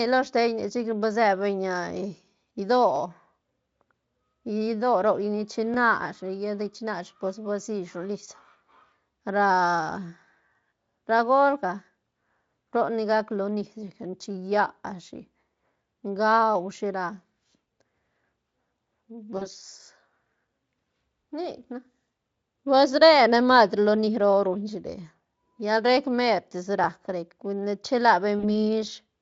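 Speech clip with two kinds of fault. At 5.74 to 5.76 s a repeated buffer plays one 20 ms chunk twice, which fits a 20 ms buffer; the waveform shows an identical cycle pattern doubled with a hard join and a brief stutter-click. At 19.37 to 19.48 s and 28.39 to 28.45 s, VoIP packet loss concealed by the speech codec replaces about 40 ms of lost audio each time with a fading buzzy or noisy extrapolation. On a spectrogram these appear as smeared bands that weaken gradually rather than ending cleanly. The underlying Speex coding contributes little or no damage.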